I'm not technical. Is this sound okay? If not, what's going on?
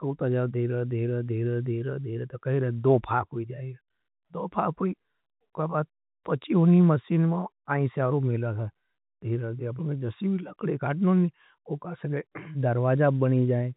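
Yes, nothing is wrong with this speech recording. It has the narrow sound of an ordinary landline phone call because G.711 telephone coding carries nothing above about 3.8 kHz, so the brightest, crispest parts of the sound are missing.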